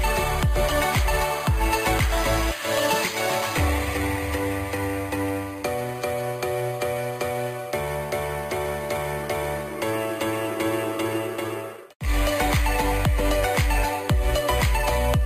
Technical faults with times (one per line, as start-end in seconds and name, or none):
0.00-15.26 imaging from sample-and-hold upsampling